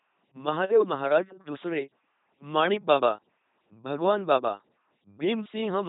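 From start to finish, the speech passes through an LPC-10 vocoder. The damage is heavy. Each moment is rebuilt from a small all-pole filter fed by either a buzzing pulse train or noise, never a blend. The result is a mechanical robot voice, with stray buzz or hiss wherever the voiced-or-unvoiced choice goes wrong. Nothing remains above 3.9 kHz, so the sound is dull and narrow. The coarseness fits a 2.4 kbit/s rate.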